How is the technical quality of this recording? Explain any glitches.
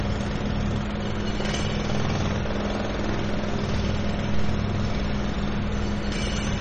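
The quality is clearly compromised, with damage running the whole length of the clip. MP3 compression artefacts are present throughout: nothing survives above about 8.4 kHz, giving a dull, lidded top end, and the remaining sound has a watery, swirling texture. This is likely a low-bitrate MP3 encode, around 32 kbps. Starved of bits, the encoder chops off the treble at a fixed point and drops weaker frequency lines, which blink on and off between frames and smear sharp onsets.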